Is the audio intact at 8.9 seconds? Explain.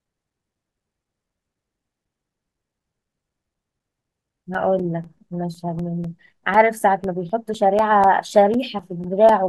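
No. At 8.9 seconds the speech sits inside a run of periodic USB or driver dropouts lasting from 0.05 to 9.29 s. Every 0.25 s something stalls the USB bus or audio driver, and a few milliseconds of audio go missing and are replaced by silence. Around forty such gaps fall across the span, each heard as a regular tick or pop riding on the voice.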